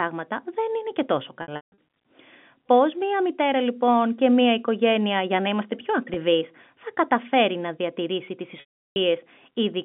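Packet loss with pitch repetition hits this speech three times. At 1.42–1.76 s, after "και τόσο", about 260 ms goes missing in bursts spread over 360 ms, with the longest run 160 ms. At 6.14–6.16 s, between "για να είμαστε πιο" and "θα καταφέρει να διατηρήσει", a single 20 ms gap passes as a brief buzzy hold. At 8.60–8.96 s, after "καταφέρει να διατηρήσει τις", 360 ms drops solidly. Each time the receiver loops the last pitch period and fades it over about 50 ms, so the longer gaps sag into silence before the speech cross-fades back in.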